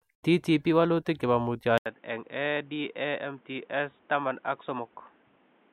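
The recording input was likely switched to a poorer device at 1.78 s, in this speech clip. After an 80 ms gap, the speech stays dull and boxy until the end, with nothing above 3.8 kHz, a somewhat lower level, and a new, faint background noise.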